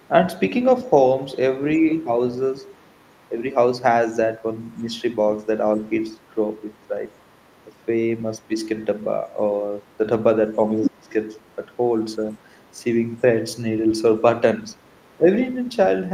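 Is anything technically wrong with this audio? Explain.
Yes. The speech has two faults, both likely from imperfect echo cancellation.

Other side's voice leaking through: a faint second voice, roughly 35 to 40 dB under the talker, at 0.0–0.08 s, 1.78–3.43 s, 4.6–12.83 s and 13.92–15.7 s. It is likely loudspeaker playback that the echo canceller left in the microphone signal.

Speech suppressed in double talk: the talker dips by about 5 to 20 dB in brief patches at 1.77–2.2 s, 3.29–3.4 s, 4.83–13.23 s and 14.67–15.27 s. With both sides talking, the canceller attenuates the near voice along with the echo.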